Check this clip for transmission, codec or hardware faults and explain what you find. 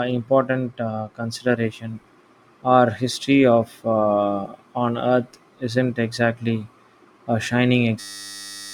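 There's one fault, right at the end: a system hang loop from 8.0 to 8.73 s. The system stalled while the hardware kept replaying a 10 ms slice of its buffer, so the sound turns into a steady 100 Hz buzz and about 0.7 s of speech is lost.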